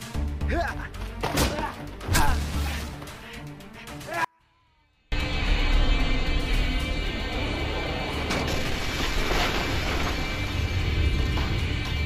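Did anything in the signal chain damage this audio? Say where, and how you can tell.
Yes. From 4.25 to 5.12 s the sound drops abruptly to a faint residue roughly 40 dB below its normal level for about 0.88 s, then snaps back. This is an audio dropout to a faint residue, likely an intermittent analogue connection while the downstream path stayed live.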